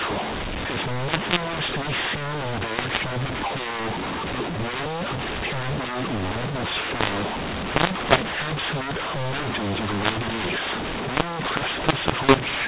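mu-law and A-law mixed up, from start to finish of this speech clip: the telephone audio was written as mu-law but is being decoded as A-law, so sample levels are scrambled, making the voice harsh and distorted, with pauses filled by noise instead of silence.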